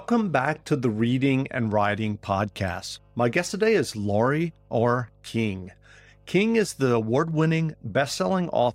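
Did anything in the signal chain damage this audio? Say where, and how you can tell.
Yes. The damage is in the analogue wiring ahead of the converter: mains hum at 50 Hz runs under the speech for the whole clip, a steady low tone sitting roughly 30 dB below the speech level. It doesn't follow the speech or change over time, which points to the power line leaking into the signal, most plausibly through a ground loop between connected equipment or induction from a nearby transformer, rather than anything digital.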